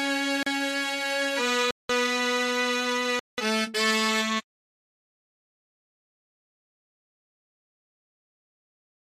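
At 0.43 s, 1.71 s and 3.19 s the sound drops to a block of digital silence, about 35 ms then twice 186 ms, the longer holes fitting an 8192-sample buffer left unfilled. The edges are abrupt, unlike a faded dropout.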